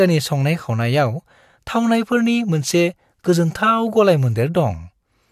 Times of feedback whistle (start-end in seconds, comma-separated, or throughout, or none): none